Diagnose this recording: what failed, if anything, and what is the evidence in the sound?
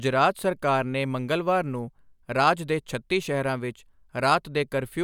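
Nothing failed; no fault is audible anywhere in it.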